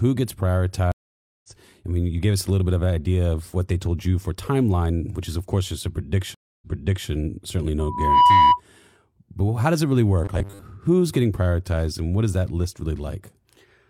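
At 0.92 s the speech drops out for 520 ms: a stream reconnect. The connection broke and the player restarted its decoder mid-stream, so when sound returns at 1.49 s, just before "I mean you gave", it has jumped about 0.3 s ahead and that stretch is lost. A second reconnect runs from 6.34 to 7.09 s after "of course just a". This time the gap is 275 ms, and the stream resumes 0.47 s earlier, so a short stretch is heard twice. Both show as blank vertical bands in the spectrogram and flat lines in the waveform, each with a brief soft onset as the fresh decoder starts.

From 7.79 to 8.60 s a loudspeaker feedback squeal rises. The microphone is picking up its own loudspeaker, and at 985 Hz the loop gain tops one, so that tone feeds on itself. It swells over roughly 0.4 s to about 10 dB above the speech, a piercing whistle. On a spectrogram it is a single bright horizontal line growing in intensity, and the waveform envelope balloons.

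Between "how does it really" and "getting prioritized and what", from 10.24 to 10.62 s, the speech turns into a rigid metallic buzz at 100 Hz, which fits a 10 ms chunk being replayed. The likely cause is robotic sound from repeated short buffers: audio arrives too slowly and the last 10 ms are looped, with roughly half the material repeated rather than new. The spectrogram shows evenly spaced harmonics at 100 Hz intervals, and the waveform shows identical repeating cycles.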